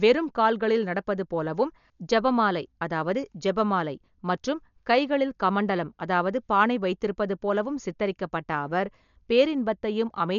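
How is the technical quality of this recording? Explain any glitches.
The recording is heavily degraded by codec damage that runs through the whole speech clip. Dolby Digital compression, present from start to finish, is the likely cause: the encoder had so few bits, which fits a bitrate around 48 kbps, that it cut the band at 6.9 kHz and left many frequency lines to be filled with dither noise, so the sound is dull, with a rough, fluttering haze around tonal parts.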